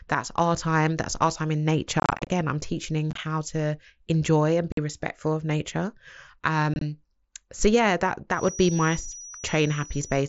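Between 2.0 and 2.3 s, after "our time in", unconcealed Bluetooth headset packet loss sets in. Short voice packets between headset and phone go missing and nothing fills the gaps, so the speech breaks into scattered holes a few tens of milliseconds long, up to about 30 ms, with hard edges that make it sound chopped and crackly. Smaller bursts of the same dropouts follow at 3.11 s, just before "to enjoy and", and then at 4.72 s and 6.74 s.

From 8.29 s, after "so yeah that", to the end, a feedback whistle appears. The loudspeaker-to-microphone loop has likely settled right at the edge of feedback, sustaining a single 5.8 kHz tone that never runs away. It is a thin, steady whistle sitting well below the speech, and its level swells and fades slowly. The whistle stays within the roughly 8 kHz band of the mSBC link.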